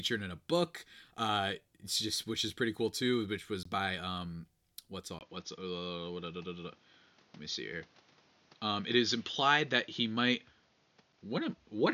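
At 3.63 to 3.65 s, right after "cool too which was" and just before "by um what's", there's a block of digital silence about 21 ms long. The speech drops straight to zero and comes back with no fade, leaving a tiny hole. That length fits a 1024-sample buffer the program didn't fill in time.

From 5.19 s to the end, following "was by um what's", the speech suddenly goes dull and boxy. The likely cause is that the input switched to a poorer device. There's a short silence of about 20 ms at the switch. Afterwards nothing comes through above 6.8 kHz. The level shifts by roughly 5 dB, and a new noise floor sits around 35 dB under the speech.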